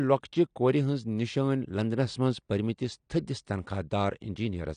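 Speech runs with plainly audible AAC compression throughout, likely low-bitrate AAC-LC near 32 kbps: dull, smeared sibilants with warbling, and a spectrogram showing nothing above 10 kHz.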